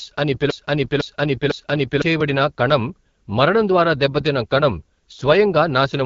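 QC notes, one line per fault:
Throughout, AMR wideband (HD Voice) codec: speech sounds plainly rough and raspy, with nothing above 7.3 kHz, which fits a low 8.85 kbit/s AMR-WB mode.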